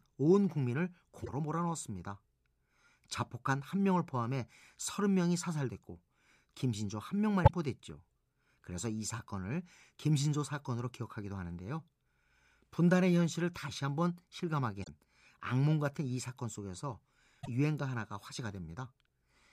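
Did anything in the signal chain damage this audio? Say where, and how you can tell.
Yes. There is damaged data in the compressed stream, a fault at the codec stage. Short glitches cut into the speech at 1.22–1.29, 7.41–7.50, 14.80–14.88 and 17.39–17.48 seconds. In each, the decoder misreads corrupted frames, loses sync, then hunts for the next valid header.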